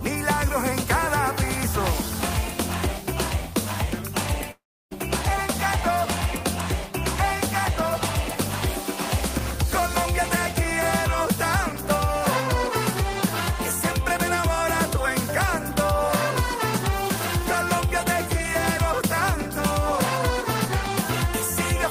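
From 4.51 to 4.93 s, a fading buzz gives way to 320 ms of flat, blank waveform and empty spectrogram, likely a long network dropout that lost 400 ms.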